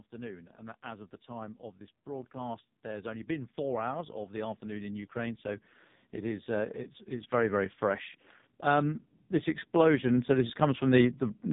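AMR narrowband mobile codec damage runs from the start: heavy, buzzy, synthetic speech with nothing above 3.8 kHz, which fits the lowest 4.75 kbps AMR-NB mode. Automatic gain rising from 0.1 to 8.11 s: the gain control judges the input too quiet and slowly lifts it, so speech and background swell together by about 15 dB.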